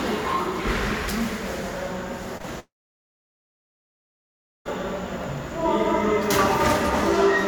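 At 2.37 s the sound smears and wobbles briefly, twice in quick succession, through about 2.45 s. This is short concealed packet loss: two back-to-back gaps of about 20 ms each never reached the decoder in time. The receiver bridged them by extending what it had last heard, patching roughly 24 ms and then 16 ms, and crossfaded back into the real signal. The result is a brief blur instead of a clean gap.

From 2.59 s the audio turns into a short fading continuation of the last sound and then goes to near-silence for about two seconds. Sound returns at 4.67 s, picking up later in the material. The likely cause is a long network dropout: roughly 2.06 s of audio never arrived. The concealment stretched the final sound only briefly before giving way, and the missing stretch was never played back.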